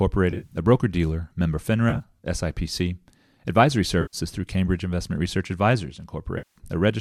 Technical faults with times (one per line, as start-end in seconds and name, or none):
0.30-0.57 AAC frame loss with concealment
1.90-2.02 AAC frame loss with concealment
4.01-4.17 AAC frame loss with concealment
6.38-6.58 AAC frame loss with concealment